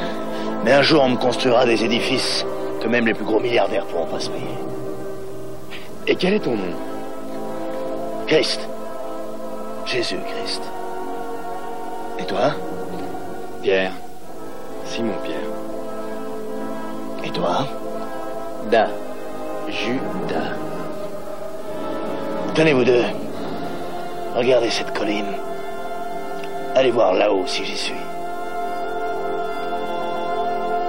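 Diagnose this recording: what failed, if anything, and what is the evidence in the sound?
Three short stutters, where the same sliver of sound plays again back to back. From 5.35 to 5.54 s a 46.4 ms block repeats four extra times, from 14.55 to 14.69 s a 46.4 ms block repeats three extra times, and from 30.01 to 30.29 s a 139.3 ms block repeats twice more. These are repeated frames, a codec or storage fault: compressed frames were written or sent more than once, so the decoder replayed them.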